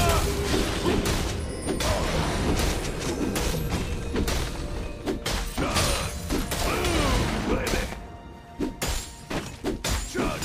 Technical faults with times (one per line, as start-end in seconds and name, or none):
7.74-7.95 loud pop